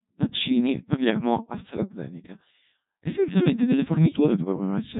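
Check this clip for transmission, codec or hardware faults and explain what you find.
One fault runs through the whole recording: the speech has passed through a Codec 2 vocoder, with heavy damage. Only pitch, voicing, energy and a coarse spectral envelope survive. The decoder rebuilds the speech from sine waves, so the original waveform is lost, and the sound is robotic and buzzy, which points to a rate near 1.2 kbit/s. A spectrogram shows rigid, smeared harmonic stacks and nothing above 3.8 kHz. The waveform looks unnaturally regular from cycle to cycle.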